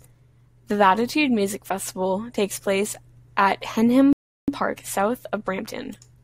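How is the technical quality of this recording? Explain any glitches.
Two playback glitches sit close together near the end of this speech recording, one a gap and the other a hurried stretch straight after it.

From 4.13 to 4.48 s the speech halts abruptly and the output goes silent for about 0.35 s before resuming. This is a playback stall: the player likely ran short of buffered data or had its output thread blocked, so nothing reached the output until it recovered.

From 4.48 s to the end, the speech sounds rushed, running at about 1.1 times normal speed with its pitch unchanged. This is time-compressed catch-up: to recover the lost time, the player trims small slices and cross-fades the joins.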